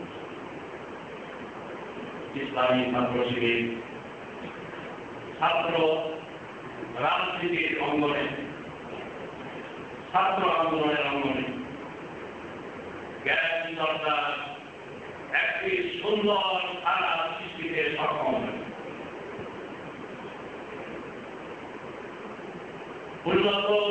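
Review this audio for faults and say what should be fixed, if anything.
Nothing here needs fixing; the sound just comes over a wideband G.722 call line at 64 kbps, so there's nothing above 8 kHz, which is exactly what that route should give you.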